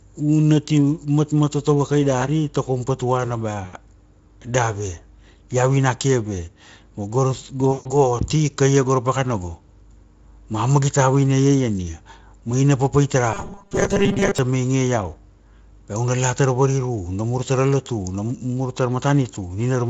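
At 3.65 s and again at 7.71 s the speech shows VoIP packet loss concealed by the speech codec. The decoder, missing incoming frames, carries on from its last pitch and spectral envelope while pulling the level down, so the sound smears into a buzzy, fading tone. The first gap covers about 80 ms and the second about 140 ms, which fits runs of four and seven 20 ms frames. Recovery lags past 3.78 s and 7.96 s as the decoder state rebuilds.

From 13.34 s to 14.39 s the speech turns into a rigid metallic buzz at 200 Hz. This is robotic sound from repeated short buffers, likely caused by audio arriving too slowly for playback, so the last 5 ms chunk is looped over and over. Something like two thirds or more of that stretch is repeated material rather than new audio, yet the buzz still loosely tracks the syllables. Underneath, the Speex coding sounds slightly noisy, which fits a rate near 28 kbps.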